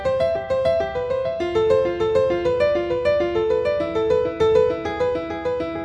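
No technical faults are audible.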